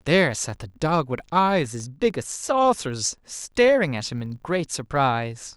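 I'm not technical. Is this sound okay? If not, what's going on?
No. A filter restarted on every block runs through the whole clip, adding a buzz at 50 Hz that gets louder and quieter along with the speech. Between 1.35 and 2.10 s there are CD scratch ticks: six short clicks, the longest only a couple of milliseconds, where damaged data was patched over.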